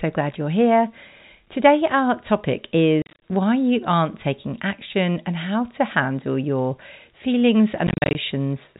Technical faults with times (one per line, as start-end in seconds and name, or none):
3.02-3.21 packet loss filled with silence
7.87-8.15 packet loss filled with silence